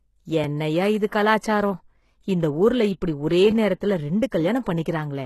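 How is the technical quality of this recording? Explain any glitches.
The speech has audible compression damage throughout and one brief pre-echo.

Across the whole clip, the treble sounds synthesised rather than captured, and nothing reaches above 12.3 kHz. The likely cause is HE-AAC compression at a low bitrate, one that fits about 16 kbps. Only the lower band is coded, and the upper band is rebuilt by copying lower bands upward under a coarse envelope, so harmonics no longer line up across the join. The codec damage is plainly audible, with s sounds gritty, metallic or lispy. Plain lowpass filtering would cut the treble cleanly, but here treble is present and sounds wrong.

At 1.10 s, just after "என்னய்யா இது", a short hiss of about 19 ms runs ahead of an attack, which sounds soft or smeared. This is pre-echo. The codec spreads quantisation noise across a whole transform block, so noise sized for the loud onset also fills the quiet moment before it. 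Ordinary background hiss sits under everything, but pre-echo comes only before an attack, never after it.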